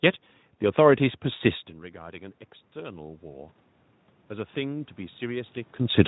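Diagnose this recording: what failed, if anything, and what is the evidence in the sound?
The fault sits in the call processing stage: automatic gain rising, twice. From 0.99 to 3.55 s the level climbs by about 7 dB, and from 4.28 to 6.03 s by about 4 dB. Each rise follows an input drop of about 20 dB. What marks it as gain control, rather than the talker moving back around 1.5 s, is that the room noise swells in step with the speech.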